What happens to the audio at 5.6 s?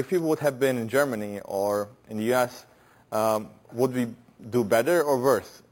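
Imaging from sample-and-hold upsampling runs through the whole clip, including 5.6 s. Samples at 11 kHz were repeated to reach 44.1 kHz without smoothing, leaving metallic fizz from 5.5 to 11 kHz, about 20 dB down.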